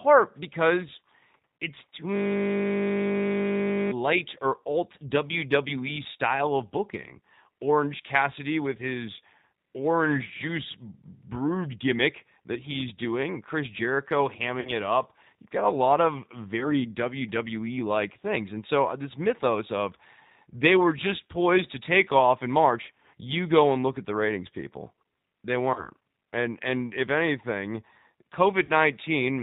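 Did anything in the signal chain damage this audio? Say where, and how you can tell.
Yes. The G.729 codec damage is at the codec stage and runs through the whole speech clip. Nothing above 4 kHz survives, and the voice has a slightly rough, synthetic grain. That fits an 8 kbit/s G.729A stream. This codec does not carry the waveform itself. It rebuilds each 10 ms frame from a vocal tract filter, a pitch predictor and a handful of pulses, and that coarse rebuild is plainly audible here.

VoIP packet loss concealed by the speech codec occurs at the network stage, four times: 14.60 to 14.71 s, just before "it up"; 16.60 to 16.83 s, just after "got a lot of"; 25.74 to 25.89 s; and 28.65 to 28.72 s. At each point the sound smears into a fading buzzy or noisy tail. The decoder stretched its last pitch and filter over the missing packets while lowering the gain. Because each frame builds on the previous one, the distortion lingers after audio resumes. 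This is why the damage at 16.60 s lasts about 230 ms, although only about 10 ms of audio went missing there.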